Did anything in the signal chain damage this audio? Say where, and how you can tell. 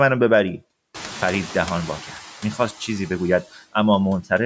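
Yes. Noise suppressor artifacts from call processing run throughout. Background noise drops about 7 dB between words and returns under them, so a spectrogram shows a pumping, blotchy noise floor.

Noise suppressor catching up, 0.94 to 2.17 s. Room noise jumps about 21 dB around one second, and the suppressor's estimate lags. The noise passes first, then sinks about 5 dB over 1.23 s, which shows on a spectrogram as a bright band that fades.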